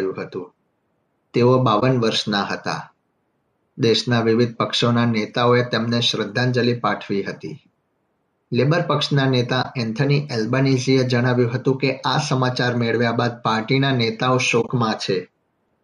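At 1.80–1.83 s, 9.62–9.66 s and 14.61–14.69 s, corrupt frame concealed: the decoder caught damaged frames and masked them, and timing stays intact.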